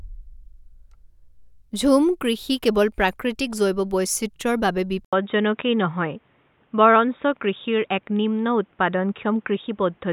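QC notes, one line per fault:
5.05 to 10.12 s, input switched to a poorer device: just after "বৈচিত্ৰ্যৰ বাবে" an 80 ms gap opens, then the speech turns boxy with nothing above 3.8 kHz and a new noise floor roughly 45 dB down at much the same level, likely a change to a narrower-band microphone.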